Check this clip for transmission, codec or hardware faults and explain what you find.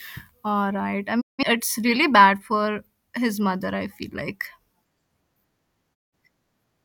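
The speech has two digital broadcast dropouts, at 1.20–1.43 s and 5.93–6.14 s. Each time, the receiver stopped getting good frames and muted, dipping to silence over about 20 ms. Roughly 170 ms of programme vanished, which fits about four lost frames. The waveform shows a flat gap, and the spectrogram shows a clean vertical blank band.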